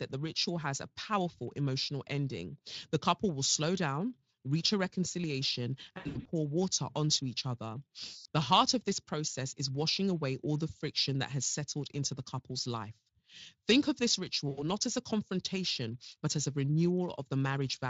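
VoIP packet loss concealed by the speech codec interrupts this speech clip at 5.97–6.28 s, 8.05–8.25 s and 14.49–14.6 s. The sound otherwise carries light coding damage consistent with a Speex stream near 24 kbps. In each gap the decoder rebuilds the missing audio from its last pitch and filter while lowering the gain, so speech smears into a fading buzz or coloured noise. The first gap loses 220 ms scattered across 280 ms, with runs up to 80 ms. The second loses 200 ms and the third 80 ms. Because each frame builds on the previous one, the voice stays weak or distorted for a short while after packets return.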